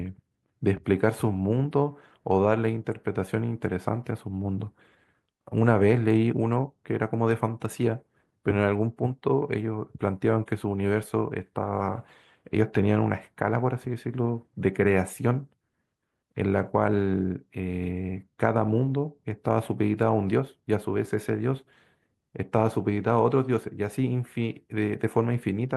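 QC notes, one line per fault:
No faults to note in this clip.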